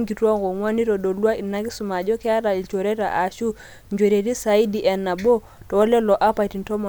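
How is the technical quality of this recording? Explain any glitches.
Listening through the recording, nothing stood out as a glitch or technical problem.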